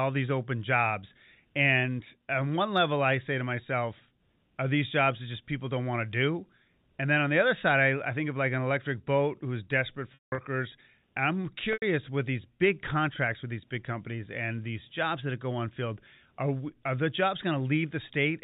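A telephone-band speech recording (G.711 mu-law, nothing above 4 kHz) has packet loss with pitch repetition at 10.14–10.38 s, after "electric boat who's desperate", and 11.73–11.82 s, before "with these big contracts". The first loses about 210 ms, with one 180 ms run. The receiver loops the last pitch period, so it sounds buzzy and then fades to silence. A spectrogram shows flat, repeating harmonic bands with no formant movement, and the waveform shows identical cycles that taper away.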